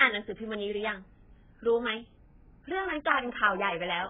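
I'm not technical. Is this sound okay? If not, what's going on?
No. The speech sounds dull, muffled and warbly throughout, with nothing above 3.7 kHz. This is likely heavy AAC compression squeezing the audio into too little data.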